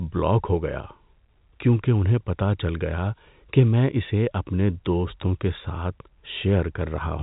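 Nothing goes wrong anywhere in this bit of speech; it just carries the usual G.711 telephone coding, which is why nothing comes through above about 3.8 kHz.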